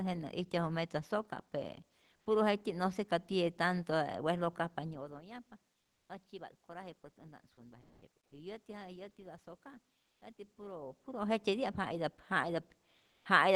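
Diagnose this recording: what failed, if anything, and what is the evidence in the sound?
Call processing stage: comfort noise in place of the background at 5.83–6.07 s, 7.81–7.99 s, 10.03–10.21 s and 12.97–13.21 s. On a spectrogram, the textured background turns to smooth, uniform noise, within about 2 dB of the original level. Likely cause: Opus discontinuous transmission, with the receiver synthesising fill noise.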